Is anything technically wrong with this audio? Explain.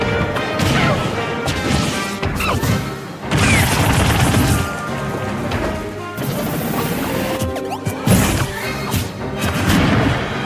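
No, nothing technically wrong can be heard here.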